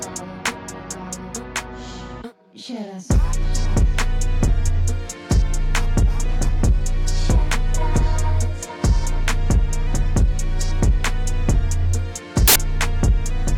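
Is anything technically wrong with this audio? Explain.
Yes. From 12.48 to 12.56 s a burst of loud, harsh broadband noise replaces the sound for about 80 ms. These are samples built from the wrong bytes: the bytes of each sample were misassembled, so the rapidly fluctuating low-order bits became the dominant part of every value.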